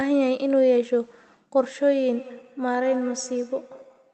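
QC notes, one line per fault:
2.12–4.13 s, feedback echo between two devices: a second device in the room replays the far end, and that output leaks back into the first microphone, where its echo canceller cannot remove sound it never played itself. The speech returns at a steady interval of about a fifth of a second, reaching about 19 dB below the direct speech, so each phrase is trailed by a thinner, ringing copy until the end.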